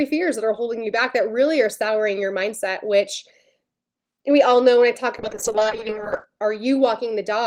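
From 5.19 to 6.31 s there is a call bitrate drop. The encoder gets far fewer bits. The speech turns coarse and muffled, and the high frequencies fall away. That fits a fall from 32 to 10 kbps, held for about 1.06 s.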